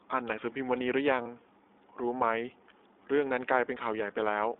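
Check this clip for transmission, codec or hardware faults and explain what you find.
Two faults are audible in this speech clip: narrowband iLBC coding throughout, and one short dropout.

From start to finish the speech sounds boxed-in and slightly rough, with a faintly synthetic edge and no brightness or low-end body. It sounds like the iLBC codec on a telephone line passing only about 300 Hz to 3.6 kHz. iLBC codes each 20 ms frame's excitation on its own, which fits its 15.2 kbps mode, and that coarse modelling leaves the plainly audible roughness.

From 1.22 to 1.27 s the speech briefly turns into a held, slightly buzzy, breathy vowel lasting about 40 ms, then snaps straight back to normal. This is lost iLBC frames, which fits two missing 20 ms frames. The decoder filled the gap by repeating the last pitch cycle mixed with noise. Since each iLBC frame decodes independently, the next frame that arrived restored the speech almost immediately.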